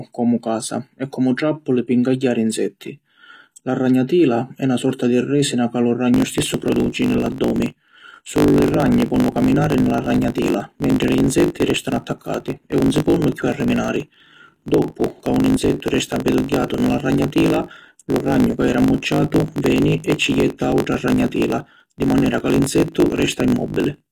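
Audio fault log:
throughout: HE-AAC compression. The treble is present but gritty and metallic, with s sounds turned lispy. This points to a low bitrate, around 24 kbps. The damage is plainly audible and likely comes from HE-AAC coding. Only the lower spectrum is coded properly, and the upper bands are rebuilt by copying lower content upward under a coarse envelope. The replicated harmonics don't line up with the real ones.
6.12 to 24.12 s: block size mismatch (truncated). Right after "ca lu", a steady 50 Hz buzz appears and lasts to the end. The speech also runs about 1.07 times fast while keeping roughly its normal pitch. One stage writes blocks longer than the next stage reads, which fits 1024-sample written blocks, and the tail of every block is discarded. Each chop repeats at the block rate to form the buzz. Dropping material compresses time without shifting pitch.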